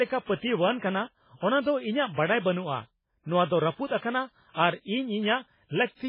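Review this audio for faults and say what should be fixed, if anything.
Heavy MP3 compression damage runs through the whole speech clip. Nothing survives above 5.2 kHz, so the top end is cut off flat, and the sound has that watery, swirly quality where quieter frequency detail flickers in and out from frame to frame, with metallic chirps on s sounds and attacks smeared. That's likely the encoder running out of bits, and the damage points to a very low bitrate, something around 16 kbps. To prevent it, keep the original uncompressed or encode at a much higher bitrate.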